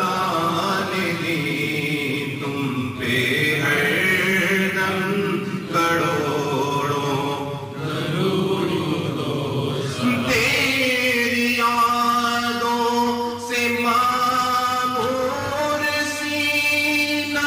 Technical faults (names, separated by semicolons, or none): none